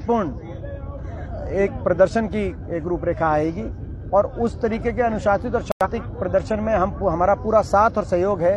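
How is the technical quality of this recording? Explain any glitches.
There is one clear defect: a corrupt frame muted dropout at about 5.72 s. The sound cuts to silence abruptly and returns at 5.87 s, a gap of roughly 0.16 s. Corrupted bits in the compressed stream made the decoder reject the affected data, and the player filled that span with silence rather than attempting playback. The hole's length suggests about two lost frames. Timing is preserved, so the audio resumes exactly on schedule after the gap, with nothing shifted or skipped.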